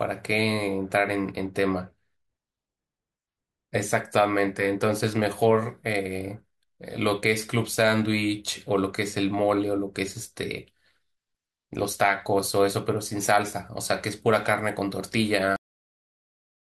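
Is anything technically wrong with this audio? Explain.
Yes. There is a cut-off end at 15.56 s. The final stretch of audio was never written out or played back, so the recording is severed while the speech is still sounding rather than being allowed to finish. The signal drops straight to digital silence with no natural decay or room tail. That dead silence fills the last second or so, making the ending sound abrupt and truncated instead of resolved.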